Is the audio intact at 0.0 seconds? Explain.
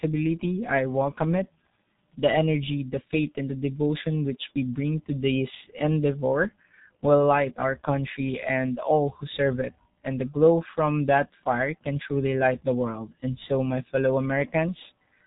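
No. At 0.0 s the speech is already passing through the G.723.1 codec, and that damage lasts the whole clip. The codec rebuilds speech from a coarse vocal model updated once per 30 ms frame, consistent with a rate near 6.3 kbit/s. Nothing above 3.8 kHz survives, so the speech sounds muffled and hoarse, with smeared consonants. A plain low-pass filter would only dull the speech, without this rough, synthetic texture.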